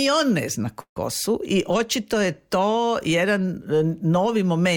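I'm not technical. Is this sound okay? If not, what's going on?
No. From about 0.80 to 0.97 s the sound briefly stalls: the last bit of sound is stretched into a short fading buzz or hiss, then drops to silence for roughly 0.09 s before carrying on. This is a call audio freeze, likely caused by data arriving late on a call connection. The receiving end ran out of sound to play, filled the wait of about 0.16 s, then resumed exactly where it left off, so nothing is lost, just slightly delayed.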